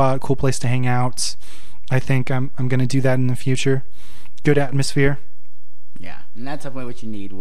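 DC offset runs throughout this speech recording, the whole waveform sitting about -15 dBFS away from zero, wasting headroom and adding constant energy at 0 Hz rather than anything audible.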